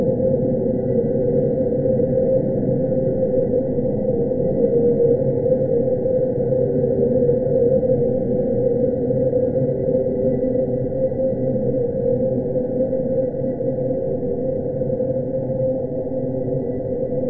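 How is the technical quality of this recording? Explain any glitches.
Nothing stood out on listening to these sounds.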